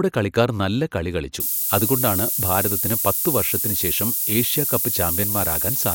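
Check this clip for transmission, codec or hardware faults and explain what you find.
There's one fault here, a low bit depth with noise shaping, from 1.40 s right through to the end at about 5.95 s, just after "കളിക്കാർ നല്ല കളി കളിച്ചു". The speech is being squeezed onto very few amplitude steps, and the sound points to something like 4 bits. The rounding error gets fed back and pushed upward in frequency, so you hear a steady, thin hiss that climbs hard toward the top of the band and sits about 5 dB above the speech.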